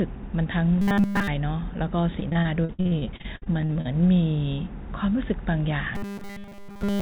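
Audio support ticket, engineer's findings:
Rigid metallic buzz at about 200 Hz, 0.82–1.27 s and 5.95 s to end, sound almost entirely replaced by repeats. Likely a starved playback buffer looping its last 5 ms.

Choppy, robotic sound with pieces missing, 2.2–3.87 s. Repeated packet loss in the jitter buffer: frequent holes up to 58 ms patched by extending prior sound, about a third of the span concealed. The call path's 4 kHz ceiling fits G.711.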